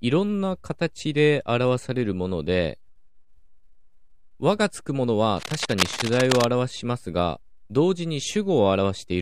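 The clip is speech with cable scratch noise from 5.37 to 6.45 s: a dense, uneven burst of scratching and rustling sits over the speech, only slightly below its level. The likely cause is a worn cable or connector being moved, its contact resistance fluctuating rapidly.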